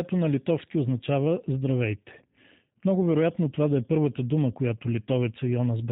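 From the first moment to the end, the speech carries the signature of the G.729 codec, with plainly audible damage. The coder rebuilds each 10 ms frame from a vocal tract filter, a pitch predictor and a sparse set of pulses rather than the waveform itself, so nothing above 4 kHz survives and the voice comes out dull, slightly rough and synthetic. The thin, buzzy texture fits an 8 kbit/s stream, most likely the G.729A variant.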